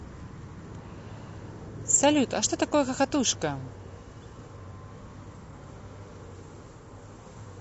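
Low-delay AAC compression runs through the whole clip, from start to finish, and the speech has a plainly audible rough, grainy texture. The likely cause is the AAC-ELD codec used for video calls. It codes audio in very short frames, which blur the fine spacing of pitch harmonics. The damage heard here fits a bitrate of around 32 kbps, too thin to carry those harmonics cleanly.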